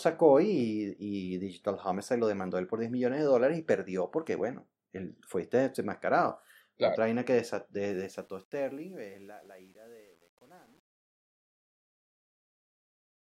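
Speech fading out from about 8 s shows truncation distortion on a fade from 7.9 s, just after "vaina que", turning gritty from 8.5 s to the end, consistent with an undithered stage keeping about 9 bits.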